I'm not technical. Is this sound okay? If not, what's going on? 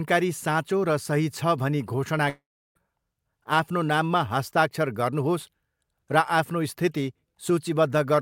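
No. A long network dropout occurs from 2.29 to 2.77 s. The speech fades into a brief buzz, then silence, likely from audio lost in transit.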